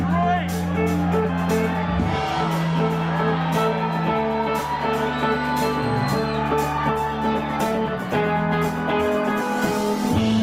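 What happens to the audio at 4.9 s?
Nothing goes wrong at 4.9 s; the audio runs on intact through that moment, with no dropout, click, glitch or other fault.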